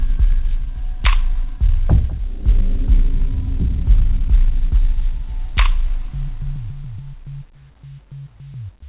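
No technical faults are audible: the sound carries the narrow telephone-band character of a normal call path, with nothing above 4 kHz, which fits a G.711 mu-law codec at 64 kbps.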